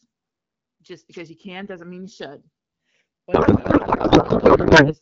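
A slow flanging sweep runs through the whole clip as channels drift apart. The two sides run on clocks a couple of hundred ppm apart, so their offset creeps toward just under a millisecond. From 3.33 to 4.95 s the speech is replaced by garbled noise and warble. This is a codec payload misread: the decoder parses frames with their fields misplaced, which points to octet-aligned AMR being read as bandwidth-efficient.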